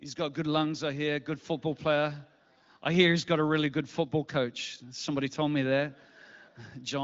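No technical faults are audible.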